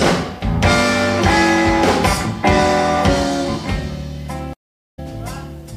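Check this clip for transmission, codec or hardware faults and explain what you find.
There's one fault here, a stream reconnect at 4.53 to 4.99 s. The connection dropped, the player went quiet for about 430 ms, then reconnected and started a fresh decoder mid-stream, so the audio picks up roughly 50 ms later than where it cut off.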